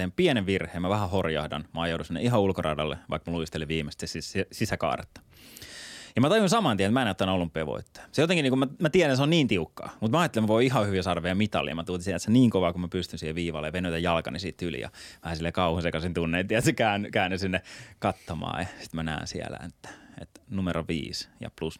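No technical faults can be heard anywhere in the recording.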